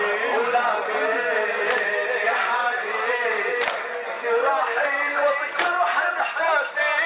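On listening, nothing in the audio stood out as a fault at any point.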